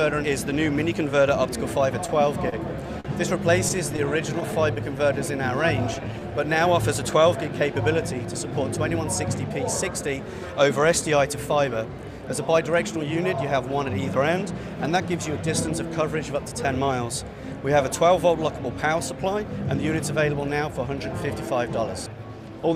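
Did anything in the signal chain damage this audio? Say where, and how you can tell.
Yes. Scattered short gaps from network packet loss run from 2.07 to 4.78 s: about ten small holes, the longest around 40 ms, each patched by extending the preceding sound. The result is brief ticks and smears. On a spectrogram they show as short smeared columns where harmonics freeze.

A jitter buffer slow-down follows in the receiver's buffer stage from 4.46 to 6.21 s. The audio runs at 96% speed, stretched by 74 ms, with pitch unchanged. Repeated pitch periods drag sounds out, and the waveform shows near-identical cycles copied in a row.

A jitter buffer speed-up from 8.18 to 9.51 s plays at 105% speed. About 70 ms of short pitch-period pieces are cut to shed excess delay. It sounds hurried at the same pitch, and the spectrogram shows events compressed in time without any harmonic shift.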